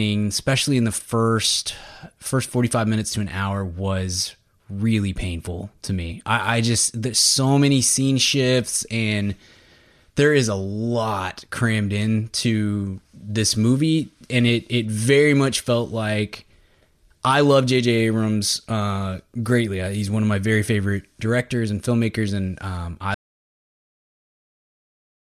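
At 23.14 s, just after "filmmakers and um I", the speech cuts off mid-flow into an audio dropout to silence lasting to the end, about 2.2 s. The input was likely lost while zeros kept being written. The waveform flatlines and the spectrogram goes completely blank, with no room tone.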